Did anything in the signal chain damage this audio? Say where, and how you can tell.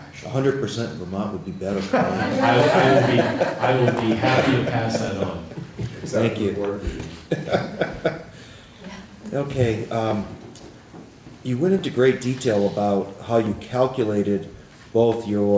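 Yes, at the buffer stage, most likely from clock drift buffer slips: two devices on independent clocks disagree by several hundred parts per million, so the buffer between them creeps until a short block of a few dozen samples is dropped or repeated. You can hear it as a click recurring every 1.68 s, about ten of them from 1.73 s to 15.14 s. That steady spacing is what points to drift rather than random damage. The audio is band-limited to 8 kHz, consistent with a wideband call codec.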